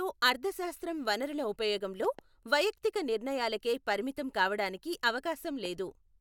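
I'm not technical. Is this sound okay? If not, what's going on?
No, there are two loud pops: a quick double pop from 2.05 to 2.21 s, right after "అర్థశాస్త్రం వనరుల ఉపయోగంలో", and a single one at 5.65 to 5.67 s. The speech carries on underneath. These are likely electrical glitches, such as a plug, a switch or static.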